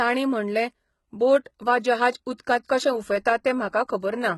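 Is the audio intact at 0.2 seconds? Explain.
No. At 0.2 s, as throughout the clip, the speech carries heavy HE-AAC compression damage, likely from a very low bitrate around 16 kbps. The treble above the crossover is rebuilt from copied lower bands, so s sounds turn gritty and metallic rather than simply dull. Nothing remains above 11.8 kHz. A plain low-pass filter would sound cleanly muffled instead.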